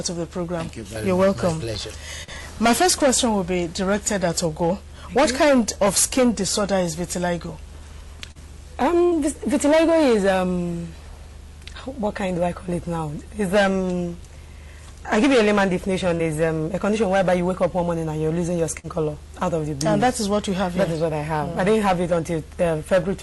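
At 2.23 s, 8.31 s, 16.15 s and 18.79 s there is short concealed packet loss: each time about 40 ms of audio failed to reach the decoder in time, and the receiver patched the hole by extending the preceding sound for roughly 40 ms before crossfading back into the real signal. Each patch is heard as a brief smear or wobble lasting under a tenth of a second, and a very short sound at that point can be lost.

Between 9.03 and 9.17 s there is a burst of packet loss: about 80 ms arrived too late or not at all, a run long enough that the receiver had to keep synthesising the last sound while fading it down, about 84 ms of fill in all. That comes through as a held, decaying tone or hiss, after which the audio picks up again a little further on, with the lost stretch simply gone.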